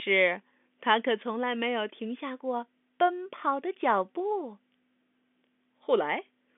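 No technical faults can be heard in this speech recording. It comes through G.711 telephone coding, so the sound is confined to the narrow phone band of roughly 250 Hz to 3.5 kHz with nothing above about 3.7 kHz, and the coding leaves at most a faint trace.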